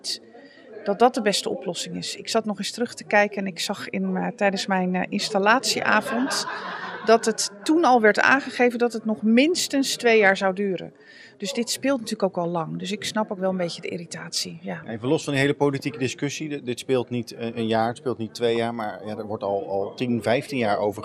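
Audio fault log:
throughout, MP2 compression: the whole thing sounds dull and gurgly, with a grainy, watery texture as the upper sub-bands drop in and out and what remains gets coarsely quantised. That's likely MPEG Layer II coding starved of bits, fitting roughly 80 kbps.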